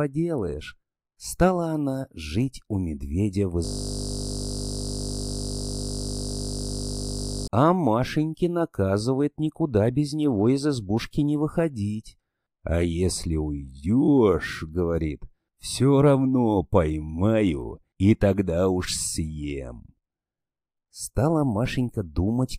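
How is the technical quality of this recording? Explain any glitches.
The recording has one serious glitch. Elsewhere it is speech.

A system hang loop runs from 3.65 to 7.48 s, right after "жить у медведя в". The computer or its audio driver stalled, but the sound hardware kept replaying the last contents of its ring buffer. A single 20 ms slice repeats close to 190 times. Because the slice is so short, it repeats 50 times per second, and the result is a steady, mechanical buzz at 50 Hz lasting nearly four seconds before the speech resumes.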